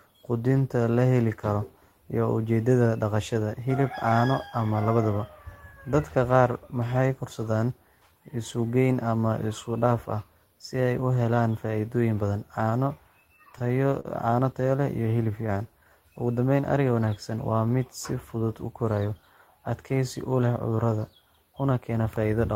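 From 13.27 to 14.42 s the speech shows repeated stalls (stutter): the jitter buffer ran dry 11 times, and each gap, the longest 44 ms, was bridged by continuing the last sound, 149 ms in all. Nothing is lost, but the flow halts in small hitches rather than stretching evenly as in a slow-down.

Between 15.31 and 15.91 s a jitter buffer slow-down repeats single pitch periods to rebuild the reserve, adding 98 ms and playing at 85% speed. Sounds are drawn out smoothly at unchanged pitch, unlike the broken, hiccuping rhythm of the stalls or a tape-style drop in pitch.

From 18.14 to 19.12 s a jitter buffer speed-up trims short pitch-period pieces to shed excess delay, cutting about a tenth of a second and running at 108% speed. The speech sounds slightly hurried while its pitch stays put, which separates it from simply playing the audio faster.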